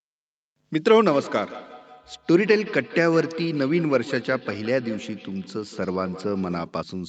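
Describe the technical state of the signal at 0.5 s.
At 0.5 s the speech is intact, with nothing wrong there beyond the ordinary band-limited sound of a call, which tops out around 8 kHz.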